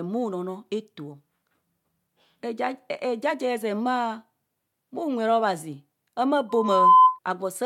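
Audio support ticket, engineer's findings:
Loudspeaker feedback squeal, 6.49–7.19 s: mic picking up its own speaker, loop gain above unity at 1 kHz; tone swells in under half a second, well above the speech.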